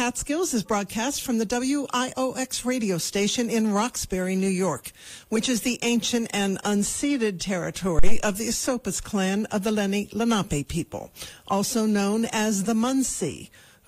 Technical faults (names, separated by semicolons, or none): phantom power thump